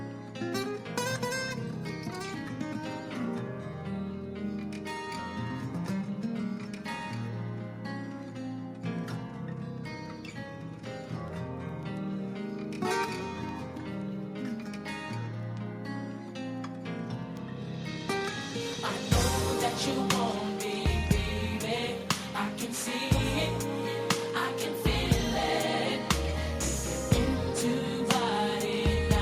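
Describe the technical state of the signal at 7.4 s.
At 7.4 s the signal is intact, with no dropout, clipping, glitch or other fault to be heard.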